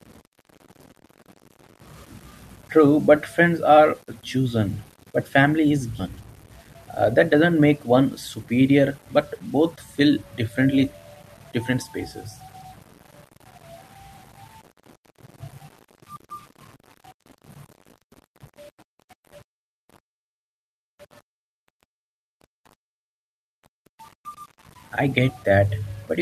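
Throughout the speech, the samples were likely rounded to a very coarse bit depth without dither, which fits 8-bit rounding. Because the rounding error tracks the waveform instead of forming a steady hiss, it sits about 35 dB below the signal and changes with it. Softer syllables and decaying tails turn gritty, and the faintest moments drop to silence or sputter. This is low bit depth without dither.

From 6.98 to 7.96 s, a jitter buffer speed-up occurs. The receiver held more audio than its target, so it trimmed short pitch-period pieces in quick succession to reduce the delay, cutting around 70 ms in total. For that second the speech runs at 108% speed while its pitch stays the same, so the delivery sounds briefly rushed before returning to its normal pace.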